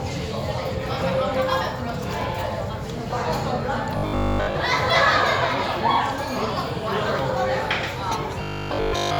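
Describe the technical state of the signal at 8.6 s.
At 8.6 s the signal is in the middle of robotic sound from repeated short buffers, running from 8.43 s to 9.19 s at the very end. The audio collapses into a rigid, metallic buzz at 50 Hz, which fits a 20 ms slice being looped over and over, likely because fresh audio stopped arriving in time. The whole span is repetition. On a waveform this appears as an identical 20 ms cycle tiled end to end, and a spectrogram shows evenly spaced harmonic lines at multiples of 50 Hz.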